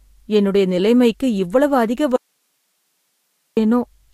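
The clip is speech. It has an audio dropout to a faint residue from 2.16 s to 3.57 s. The speech cuts out abruptly just after "என்னுடைய நிலைமைக்கு இவ்வளவு அதிக". For about 1.4 s, only hiss remains, roughly 50 dB below the speech. The cut is sudden, not a pause or a fade. The likely cause is a loss of the wanted signal while the path after the break stayed live and kept passing its own noise.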